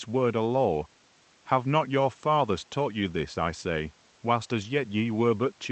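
Nothing stood out on listening to this speech, which comes through a WebRTC call path with the Opus codec and its audio band topping out around 8 kHz.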